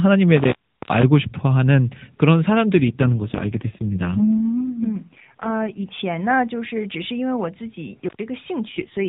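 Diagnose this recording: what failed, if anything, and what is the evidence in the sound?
Intermittent contact, 0.37–1.04 s and 8.05–8.23 s, in the analogue wiring. The speech cuts out for about 375 ms and then 101 ms, with crackle at each edge and faint hiss while the line is open, as a loose plug or cable briefly breaks the signal path.

AMR rate drop, 2.76–5.84 s and 8.68–9.08 s, at the network and codec stage. The narrowband band stays the same without gaps, but the voice turns rougher and more synthetic, which fits a fall from 12.2 to 4.75 kbps on a weak radio link, returning after the first drop.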